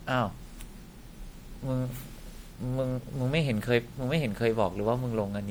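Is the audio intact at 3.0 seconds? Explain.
No, at 3.0 s, as across the whole clip, there's generation loss: a swirly, hollow smear with blurred attacks, likely from roughly seven rounds of MP3 re-encoding at around 96 kbit/s.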